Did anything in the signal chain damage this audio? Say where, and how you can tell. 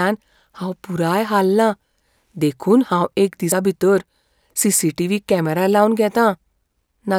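Yes. There are two jumps in the sound, at 0.84 s and 3.52 s. Neither leaves a gap of silence. The sound simply skips forward. The first skip loses about 20 ms, and the second loses roughly 70 ms. The likely cause is a dropped buffer (overrun) at the driver or buffer stage. Samples were overwritten before the software read them, so the sound on either side was spliced together.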